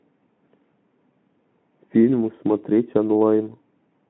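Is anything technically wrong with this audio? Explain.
No, nothing technically wrong jumps out in this speech, which comes through a Speex link at 15 kbps with the narrow telephone-style band of roughly 150 Hz to 3.4 kHz you'd expect from that path.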